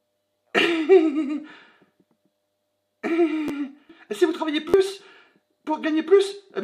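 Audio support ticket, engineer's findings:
Repeated buffer: clicks at 0.34 s and 3.48 s, a brief buzz over 4.69 to 4.74 s. Playback underrun replays the last block; the 11.6 ms repeats fit a 512-sample buffer.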